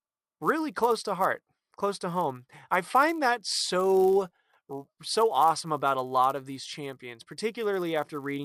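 The resampler was restarted on every block: the speech appears to have been upsampled, likely from 24 kHz to 48 kHz, in independent 10 ms chunks, so each chunk's edges were converted without the real neighbouring samples. The resulting small error at every boundary repeats 100 times a second, heard throughout as a rough buzz riding on the speech that disappears in the pauses between phrases.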